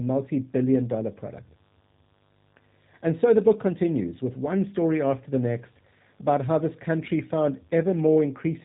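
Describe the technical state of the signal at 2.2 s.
At 2.2 s a steady, raspy mains buzz runs well beneath the speech, as it does for the whole clip. Switching spikes twice per 50 Hz cycle spread harmonics up into the kilohertz range. The speech also sounds slightly rough and synthetic, with nothing above 3.8 kHz, because G.729 coding throughout rebuilds it from a vocal tract filter, pitch predictor and sparse pulses. This fits an 8 kbit/s stream, and the damage is plainly audible.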